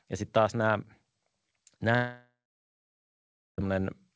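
At 1.96 s the speech breaks off into a buzzy, hissing continuation of its last sound that fades within a few tenths of a second, leaving about 1.2 s of silence before the speech resumes at 3.60 s with roughly 1.6 s simply gone. This is likely a long network dropout, where packets stopped arriving and the receiver stretched out the final audio before giving up. The band-limited sound, with nothing above 8 kHz, fits the G.722 call codec.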